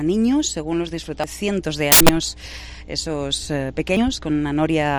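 There's a steady 60 Hz mains hum under the whole clip, about 20 dB below the audio, the kind of thing a ground loop or a nearby transformer leaks into the line. At 1.24 s you get compressed frames skipped: the audio jumps ahead about 300 ms, and since this is lossless FLAC the join is a hard cut rather than a smeared one. The same thing happens again from 3.88 to 3.97 s, jumping ahead about 100 ms. Between 1.92 and 2.23 s there's a corrupt FLAC frame problem, really several frames in a row with flipped bits that the decoder didn't catch by checksum. The prediction runs on wrong values there, so you hear loud garbage in place of the real audio until clean frames pick up again.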